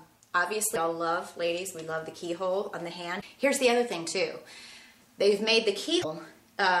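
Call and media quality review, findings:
Damaged data in the compressed stream: three short glitches, about 55 ms each, at 0.72–0.78 s, 3.18–3.23 s and 6.00–6.05 s. Probably corrupted data reaching the decoder. Bad bytes in those frames get misread or rejected, the decoder loses sync and hunts for the next valid frame header, and you hear a brief glitch before it picks up again. The repeated hits are worth checking upstream in transport and storage.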